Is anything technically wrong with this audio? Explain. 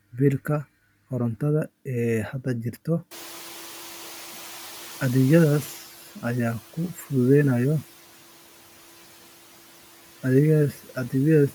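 Yes, there are two noise-suppression problems. The room noise jumps by about 23 dB around 3 s, and after that it sits about 21 dB under the speech.

The noise suppressor is catching up from 3.11 to 5.81 s, starting right after "hadda jira". The suppressor's picture of the background is still tuned to the quieter room, so for a moment the louder noise comes through with less reduction. Over the next 2.7 s its estimate adapts and the noise sinks by about 8 dB. You hear the background swell and then slowly settle.

From 10.73 to 11.12 s there's speech cut by the noise suppressor. Here it mistakes bits of speech for background and pulls them down along with the noise, by as much as about 8 dB. Only about a tenth of a second in total is affected. Those soft bits come across as swallowed or oddly faint, like the talker briefly dropping away mid-sound.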